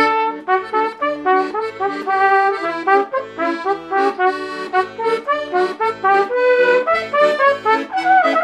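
No technical faults are audible.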